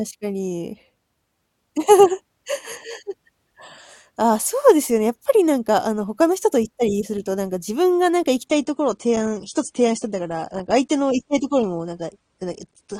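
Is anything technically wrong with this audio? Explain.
Yes. Adaptive stream at a lower bitrate from 8.47 s to the end: the stream switches abruptly, with no gap, to a leaner encoding consistent with a drop from about 96 to 32 kbit/s AAC. The treble vanishes above 9.7 kHz and the speech sounds duller.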